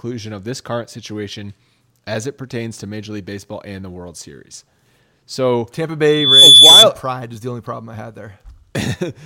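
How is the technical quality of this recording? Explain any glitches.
The speech has one clear fault. A loudspeaker feedback squeal runs from 6.07 to 6.86 s, just before "pride is the only". A microphone re-amplified its own loudspeaker until a 3.5 kHz tone swelled, over about a third of a second, to roughly 15 dB above the speech.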